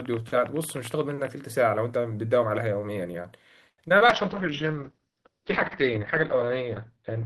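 Right from the start to 1.28 s there's a train of clicks, about fifteen irregular pops at roughly 12.6 per second, a few dB above the speech. It's likely nearby interference or a faulty connection. From 3.69 to 4.10 s, repeated packet loss leaves four holes, the longest 87 ms, and the patching gives that choppy, robotic sound. Then from 4.12 s to the end comes a call bitrate drop, from 32 to 7 kbps, with bandwidth shrinking from 20 kHz to 6 kHz, so the speech goes muffled and rough.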